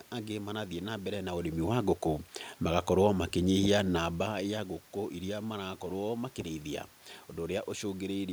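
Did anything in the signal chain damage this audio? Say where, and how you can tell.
No, nothing in this speech stood out on listening as damage from any stage of the signal chain.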